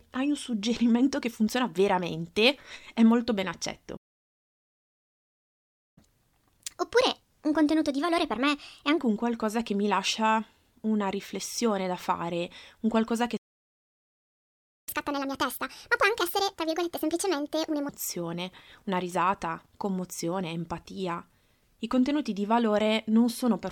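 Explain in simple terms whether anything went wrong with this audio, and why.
Two things go wrong here, each twice.

First, a playback stall. Right after "veramente è molto ben" the sound cuts out from 3.96 to 5.98 s, about 2 seconds, and again from 13.37 to 14.89 s, about 1.5 seconds. Most likely the player ran out of data, so it went quiet until it caught up.

Then comes catch-up at higher speed, where the player rushes through the backlog. From 5.98 to 8.98 s it runs 1.25 times fast, roughly four semitones sharp, settling before "un qualcosa che mi". After "fare un qualcosa che", from 14.89 to 17.89 s, it's 1.5 times fast and about seven semitones high, so the speech sounds chipmunky.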